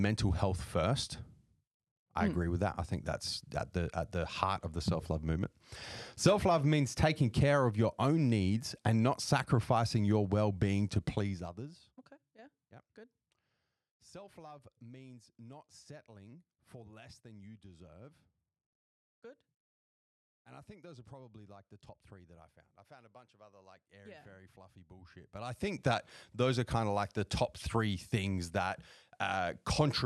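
Right after "your well being to", from 11.12 to 12.01 s, there's zipper noise: the level drops by roughly 25 dB in coarse jumps, about 50 a second, with no smoothing, so each jump clicks and you hear a fast ticking zip over the speech.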